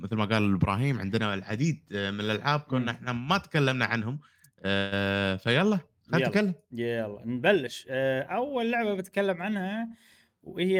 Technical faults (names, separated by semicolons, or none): call audio freeze; jitter buffer speed-up